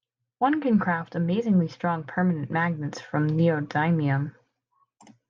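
No technical faults can be heard anywhere in the speech recording; the signal stays continuous and stable throughout.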